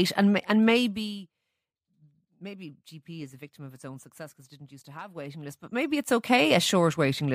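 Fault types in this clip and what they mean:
Zipper noise: from 0.67 to 1.21 s, right after "and and", the speech is turned down about 20 dB in unsmoothed 1 dB jumps, around 40 per second. Each jump clicks, so the fade sounds like a rapid ticking zip.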